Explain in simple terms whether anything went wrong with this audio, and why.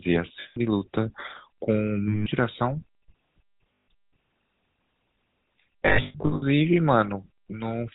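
The whole clip carries the sound of the GSM full-rate codec, the original mobile-phone speech coder. It rebuilds the voice from a simple model of the throat and mouth, driven by a coarse train of pulses, and throws away everything above 4 kHz. The result is plainly audible: speech sounds dull, buzzy and gravelly from start to finish, like an early mobile call.

On top of that there are lost GSM frames, moments where pieces of the phone signal never arrived. The decoder fills each gap by repeating the last good piece, so instead of silence you hear a brief rough, metallic ringing. This happens at 0.40 s for 160 ms, at 2.08 s for 180 ms and at 3.74 s for 140 ms. From 5.86 s to 6.43 s a cluster of shorter dropouts, the longest around a tenth of a second, makes that stretch stutter and ring repeatedly.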